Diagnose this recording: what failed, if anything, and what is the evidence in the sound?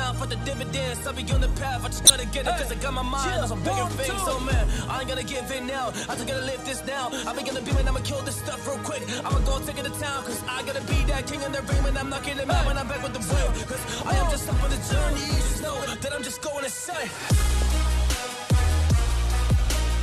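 Corrupt frame decoded, at 2.05 to 2.10 s and again at 17.62 s: a codec fault. Damaged bits in compressed frames were decoded and played instead of being concealed, so misread gains or codes placed energy at the wrong frequencies and produced short spurious bursts foreign to the audio. The first event lasts about 56 ms, which fits a couple of damaged frames, and is roughly 10 dB louder than the second. The second is brief, with roughly seven frames hit.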